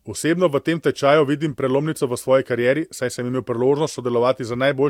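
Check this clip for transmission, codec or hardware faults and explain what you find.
One codec fault stands out, a corrupt frame decoded, from 1.51 to 1.53 s, between "v tem tečaju vidim" and "prelomnico v svoji karieri". A single compressed frame arrived with damaged bits, and the decoder played it anyway, reading wrong gains and codes and placing energy at frequencies the sound never had. For those roughly 26 ms it comes out as a brief chirp or blip of noise, peaking somewhere around -30 dBFS.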